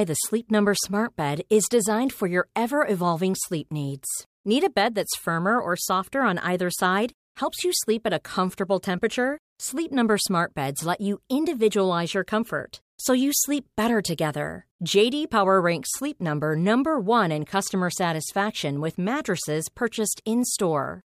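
A speech recording, and nothing is technically wrong with it.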